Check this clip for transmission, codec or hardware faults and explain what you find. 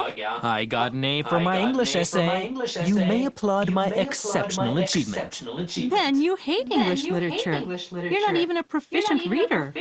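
One fault is present: an echo leak, recurring through the speech clip.

From 0.0 to 0.43 s, 1.23 to 3.34 s, 3.63 to 6.24 s, 6.58 to 8.48 s and 8.9 s to the end, a second copy of the speech trails the original by about 0.81 s. The likely cause is a far end playing the call on a loudspeaker while its echo canceller fails to subtract what its microphone picks up, so the residue returns down the line. The echo sits close to the direct speech, roughly 5 dB below it, and is cut off at 8 kHz like the rest of the call audio.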